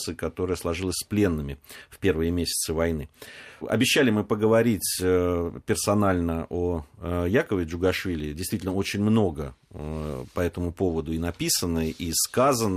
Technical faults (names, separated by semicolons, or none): none